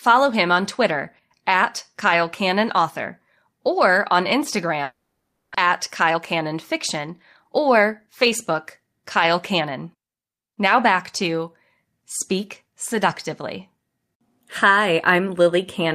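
Speech with two network faults. From 4.83 to 5.56 s the sound smears into a fading concealment buzz, with no silence, likely a long network dropout that loses about 0.4 s, far longer than a brief packet-loss glitch. From 5.66 to 10.23 s a jitter buffer speed-up runs the speech about 6% fast at unchanged pitch, trimming roughly 0.3 s of the built-up delay, unlike a pitch-shifting playback-rate error.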